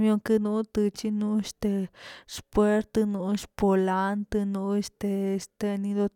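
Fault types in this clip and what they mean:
No technical faults can be heard in this speech recording; the signal stays steady and continuous throughout, with nothing to list.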